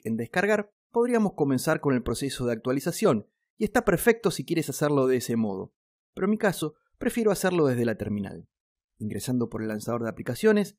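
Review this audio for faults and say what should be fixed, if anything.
No faults are audible here, so nothing needs fixing.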